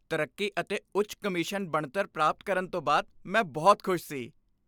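Speech, with no technical faults to point to. There is nothing here that needs a time or a cause.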